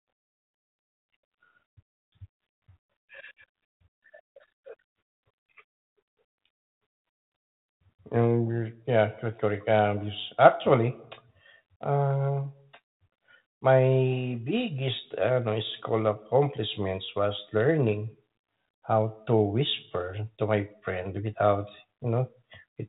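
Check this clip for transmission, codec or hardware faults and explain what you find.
No transmission, codec or hardware faults found in this speech; it goes through a 32 kbit/s G.726 ADPCM path working as intended, audible only as the expected telephone bandwidth cut at 4 kHz and light coding texture.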